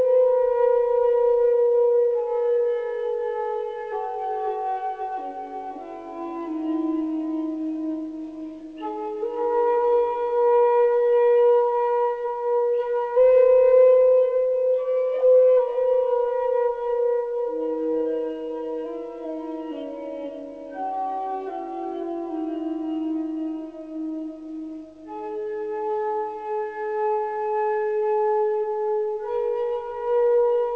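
No technical faults are audible.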